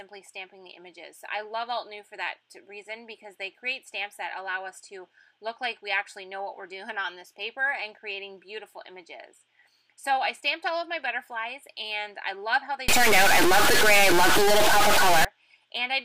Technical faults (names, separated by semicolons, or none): stuck bit